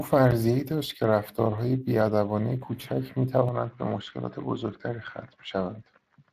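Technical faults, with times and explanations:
Throughout: Speex codec. The speech has a plainly audible hoarse, grainy edge, the kind you get when a CELP coder runs short of bits for the excitation and fills the gap with noise. That amount of damage fits a bitrate of about 22 kbps. Nothing comes through above 15.3 kHz, and the upper band has a hissy, synthetic quality, as if it's been reconstructed rather than carried through cleanly.
3.49 to 6.32 s: input switched to a poorer device, most likely a change of microphone or a drop into a headset's call profile. With no gap at all, the sound turns duller and boxier. Everything above 7.5 kHz disappears, the level falls by about 5 dB, and a new, fairly quiet background noise sits roughly 45 dB below the speech. It stays that way to the end of the clip.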